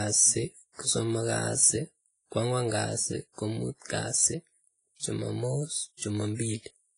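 Speech, and it's heavily smeared the whole way through: there's a washy, ringing quality with hiss that swells and fades with the sound, and nothing above about 10.1 kHz. That's likely WMA compression, with a low bitrate around 24 kbps zeroing the weak detail.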